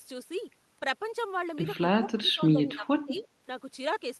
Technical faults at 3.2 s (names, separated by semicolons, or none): speech suppressed in double talk; echo leak